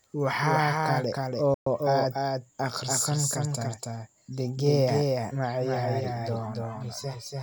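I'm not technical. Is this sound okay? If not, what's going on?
No. A doubled audio track runs through the whole recording: the speech plays twice, with a second, quieter copy following roughly a third of a second behind. This is likely because the sound was picked up again by a slower route, so every word echoes.

A playback stall occurs from 1.54 to 1.67 s. The speech suddenly cuts to silence for 120 ms, then continues with "aad akhrisan kartaa". The player likely ran short of data for that moment and paused until it caught up.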